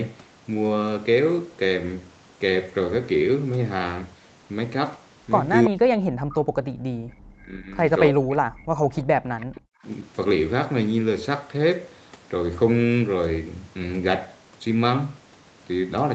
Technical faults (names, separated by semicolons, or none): echo leak; speech suppressed in double talk